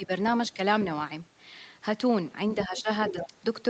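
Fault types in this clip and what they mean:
speech suppressed in double talk: The speech dips by around 10 dB, sounding ducked, at the very start, near 2.7 to 2.9 s and again from 3.1 to 3.4 s. This is likely an echo canceller that could not separate the talker from loudspeaker echo while both sides spoke, so it turned both down.
other side's voice leaking through: A second, fainter voice surfaces behind the talker from 2.58 to 2.82 s and from 3.01 to 3.27 s, roughly 10 to 15 dB below the main speech. It is likely far-end audio from the loudspeaker that the echo canceller did not fully remove from the microphone.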